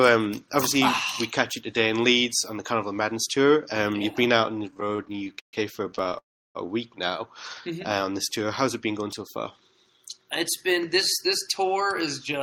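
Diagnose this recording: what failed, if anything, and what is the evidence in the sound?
Repeated stalls (stutter) from 4.71 to 6.16 s, a network and jitter-buffer fault: 26 brief holds, the longest 137 ms, fill about 30% of that span with stretched continuation of the preceding sound. Unlike packet-loss dropouts, nothing is skipped; the audio drags and catches rather than losing pieces.

A call audio freeze follows from 6.18 to 6.57 s. The last sound is held for 370 ms and fades to silence for about 320 ms before continuing exactly where it stopped, likely from a late packet burst on the network. A single long held gap with no lost audio separates it from the choppy stutter before it.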